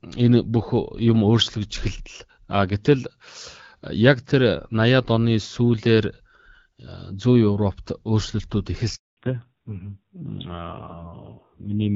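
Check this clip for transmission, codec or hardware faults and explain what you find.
Two faults show up, both bunched near the end of the call.

At 8.95 s there's a handover gap. The speech drops out abruptly and stays silent until 9.17 s, about 220 ms in all. That's the signature of the call being passed from one network to another with no speech frames reaching the decoder during the switch, so whatever was said in that window is simply gone rather than garbled.

From 9.17 s to the end there's a fallback to narrowband. Up to that point the sound has the wider HD Voice bandwidth, with only light AMR-WB coding texture, consistent with a mid rate around 12.65 kbit/s. After the gap everything above 4 kHz disappears and the speech turns duller and rougher. That points to the new link renegotiating down to an AMR narrowband codec, and the rasp suggests one of its lower rates, something like 5.9 kbit/s.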